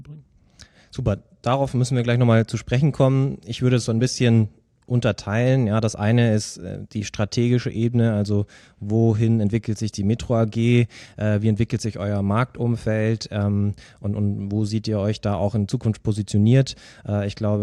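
Clock slip clicks run from 0.27 s to 17.44 s: faint, evenly spaced ticks roughly every third of a second, around seventy in all, riding on the speech and dropping out in the pauses. The likely cause is two devices running on independent clocks that differ by something like 70 parts per million, so a single sample is dropped or repeated each time that drift accumulates to one full sample.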